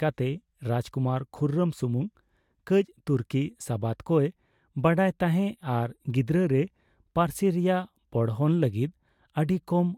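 No technical faults can be heard anywhere in this speech recording, so there is nothing in its signal to point to or explain.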